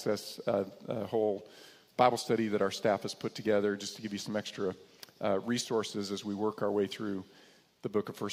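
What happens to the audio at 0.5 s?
Nothing goes wrong at 0.5 s; the audio plays through that moment intact.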